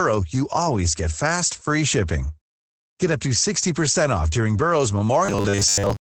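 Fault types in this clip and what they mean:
Opus voice compression: the speech went through Opus's SILK voice coder at about 12 kbps in wideband, so nothing is kept above roughly 8 kHz. The coarse coding is plainly audible, and the voice comes out muffled, somewhat hoarse and slightly robotic.
Robotic sound from repeated short buffers: the likely cause is audio arriving too slowly, so a 10 ms stretch was replayed over and over in place of most of the real signal. From 5.26 s to the end, this forces a rigid 100 Hz metallic buzz onto the speech.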